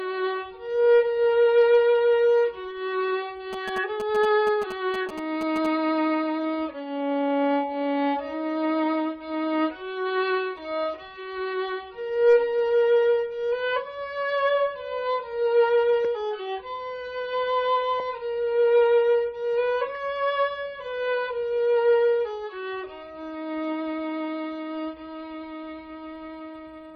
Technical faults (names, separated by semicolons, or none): GSM signalling bursts